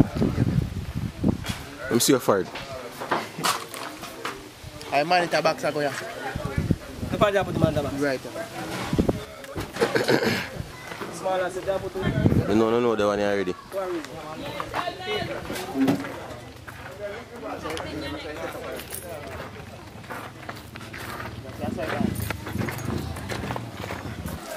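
A digital gain setting was likely applied without a ramp at 9.25 s, a sudden gain jump: sound and background noise drop about 8 dB together until 9.76 s.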